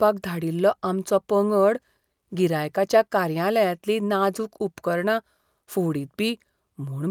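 No technical faults occur at any point in the speech, so there are none to describe in time order.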